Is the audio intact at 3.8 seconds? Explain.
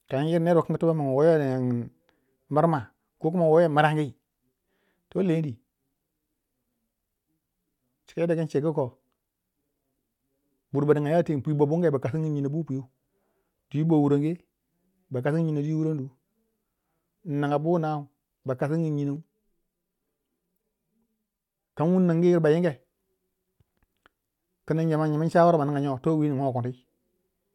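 Yes, at 3.8 seconds the speech plays through cleanly, with no dropout, click, distortion or other fault to be heard.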